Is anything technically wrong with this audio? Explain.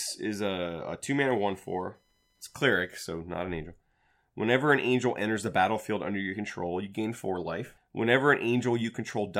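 Yes. From 1.07 to 3.07 s, between "is a a" and "not an angel", there is computer activity noise. Shifting processor or peripheral load disturbs the audio circuit's shared ground, adding a faint chirping buzz pulsing around 1 kHz, roughly 45 dB below the speech.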